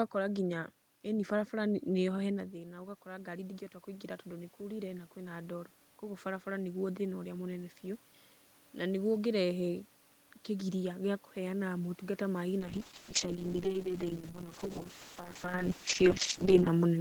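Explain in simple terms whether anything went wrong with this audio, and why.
Two things went wrong.

The first is automatic gain rising, from about 2.33 to 8.11 seconds. Around 2.5 seconds the talker seems to move back, so the sound drops. The system then turns its own volume up slowly over several seconds. A real move changes the level quickly and leaves the room noise alone. Here the level climbs gradually, and the background noise swells along with the voice, which shows that the equipment raised the volume.

The second is a call bitrate drop, from about 12.6 to 16.77 seconds. The connection's estimate of available bandwidth fell, so the audio was squeezed into much less data. For about 4.1 seconds the sound is at its worst: muffled, rough and watery, with the crisp high end missing. A talker moving only makes the sound quieter or louder. Here the tone itself degrades, and it stays that way even around 15.5 seconds, when the talker shifts position.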